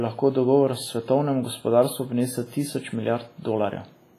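Throughout the speech, a washy, ringing smear trails each sound, with hiss that breathes with the signal and nothing above 15.4 kHz. The likely cause is WMA compression, its long transform blocks spreading heavy quantisation noise, which fits a bitrate near 24 kbps.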